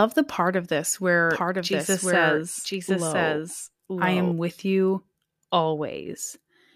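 A slower second capture path likely mixes in a doubled audio track from 1.3 s, after "the part of this", to 4.32 s, before "with you". The copy trails about one second behind, somewhat quieter and dry, and starts and stops abruptly.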